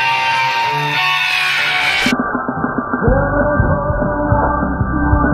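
An adaptive stream at a lower bitrate takes over at 2.11 s and lasts to the end of the clip. The connection slowed, so the player swapped to a much leaner version of the same stream. The sound suddenly narrows, with nothing above 1.6 kHz, and codec artefacts thicken, with no gap at the switch. The scale of the drop points to a fall from around 96 kbit/s AAC to about 8 kbit/s.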